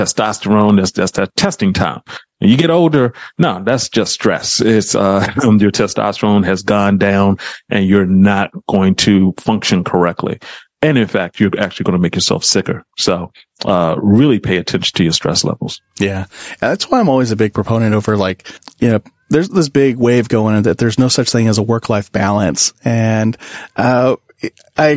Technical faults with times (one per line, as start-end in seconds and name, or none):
0.00-24.97 gain pumping